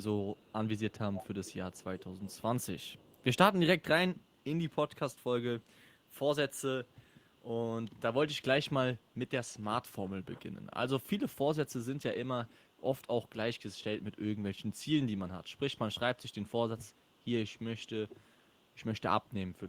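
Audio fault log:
0.02–3.36 s, 4.16–7.44 s, 8.38–8.42 s, 8.97–14.85 s and 15.44–19.68 s: echo leak. A faint copy of the speech trails it by 488 ms. It is strongest in the first stretch, about 25 dB below the speech, and sits around 35 to 40 dB down elsewhere. The likely cause is a loudspeaker on the other end whose echo canceller let residual pickup return into the call.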